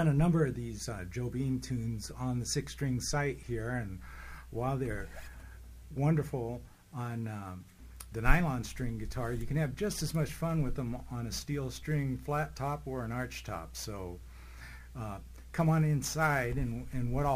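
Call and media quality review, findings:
Sample clock jitter from 6.53 s to the end. Hiss and roughness tracking loud, bright passages, roughly 25 dB below the signal. Unstable converter clock, around 10 µs, mistiming samples.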